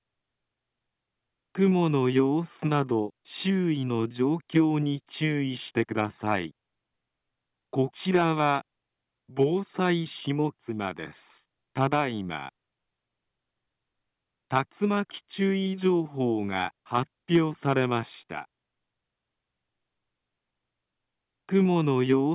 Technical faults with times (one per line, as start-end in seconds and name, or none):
none